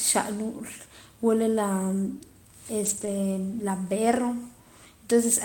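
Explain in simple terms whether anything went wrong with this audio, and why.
Some data packets went missing in transit at 2.85 to 3.07 s and again at 4.11 to 4.17 s. Each was a lost packet rebuilt from error correction: a rough backup copy filled the hole, so the speech doesn't drop out but turns briefly grainy and noisy.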